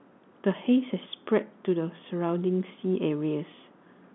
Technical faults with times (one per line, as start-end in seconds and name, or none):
none